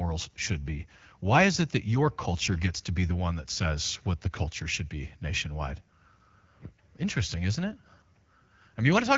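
No technical faults can be heard in this speech recording.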